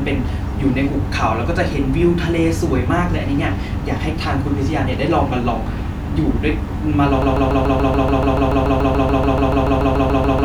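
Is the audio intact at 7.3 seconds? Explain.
No, at 7.3 s we're inside a broken-record loop running from 7.22 s to the end: a 144 ms fragment repeats back to back, likely a stalled stream resending its last buffer.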